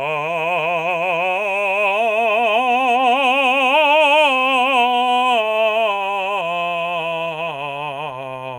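Across the whole music clip a faint hiss and grain ride on the sound, thickening in loud, bright passages and vanishing in silence. That is sample clock jitter: the converter clock wanders by around a microsecond, making an error roughly 40 dB below the music.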